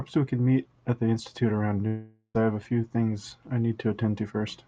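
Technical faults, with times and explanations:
1.87–2.37 s, long network dropout: about 0.48 s of audio likely never arrived over the call link. The receiver smears the last sound into a fading buzz for about 0.47 s, leaves roughly 70 ms of silence, then the speech resumes with that stretch lost.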